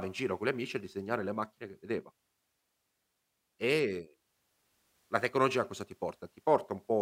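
No technical faults turn up anywhere in the speech recording. There is nothing here that needs a timestamp or a closer look.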